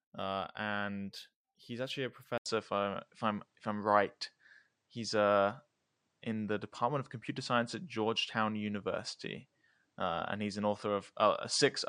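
From 2.38 s, after an 80 ms gap, speech loses everything above 9.8 kHz and gains new hiss, likely an input switched to a poorer device rather than mere filtering.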